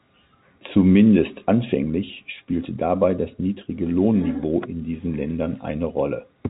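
Nothing goes wrong anywhere in this speech clip; it just has that familiar G.711 telephone sound, with the top end stopping around 3.8 kHz.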